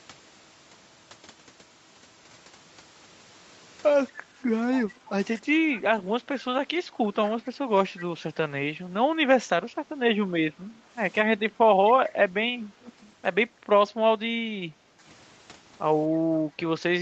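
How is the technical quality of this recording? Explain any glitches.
The recording has one recurring glitch, an echo leak, heard in six short bursts at 4.74, 5.06, 5.74, 7.28, 9.72 and 12.81 s, each lasting from a few hundredths of a second up to about a quarter second. A faint copy of the speech returns 237 ms behind the original, most likely because a far-end loudspeaker was picked up by a microphone whose echo canceller let scraps through. The copy sits well below the direct speech, about 20 to 25 dB down, and about 40 dB down near 9.7 s. Unlike room reverberation, it is a discrete, delayed repeat that appears only in brief fragments, not a smooth tail after every phrase. The band stopping near 8 kHz fits the call path's Opus coding.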